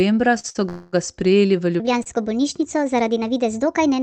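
At 0.39 to 0.46 s and again at 0.50 to 0.57 s, short stalls from late packets hold the speech for about 43 ms and then 51 ms. The jitter buffer ran dry and the receiver stretched the last sound until each packet came in. A brief buzzy smear precedes "ga sprejeli v". On a spectrogram the harmonics run flat and blurred, and the waveform shows a repeated, slightly fading cycle.

From 0.69 to 0.95 s a call audio freeze adds 240 ms before "ga sprejeli v". The last sound continues as a fading buzz, not silence, and then the speech resumes where it stopped. The likely cause is packets held up in transit. The spectrogram shows a smeared horizontal band, and the waveform shows a decaying loop.

From 1.80 s to the end, a section at the wrong speed plays 1.35 times fast, raising pitch by about five semitones and making the speech hurried and high. Harmonics sit visibly higher and more widely spaced, and waveform cycles are compressed. 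Within it, a further short stall at 2.03 to 2.08 s comes just after "ga sprejeli v", holding the last sound for about 29 ms. Throughout, the Opus call path's energy stops near 8 kHz.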